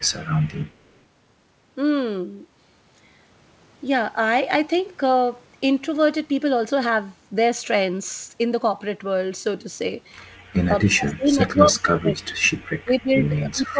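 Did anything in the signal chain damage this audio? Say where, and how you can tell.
Yes. At 0.67 to 1.0 s there is an echo leak in the call processing: a very faint delayed copy of the speech, trailing by about 244 ms, sits far below the direct sound. The likely cause is a far-end echo canceller letting loudspeaker pickup through.

The speech is suppressed in double talk at 10.67 to 12.44 s and again from 12.8 s to the end. Level falls by as much as roughly 35 dB, then about 25 dB. This is likely an echo canceller muting the talker during overlapping speech.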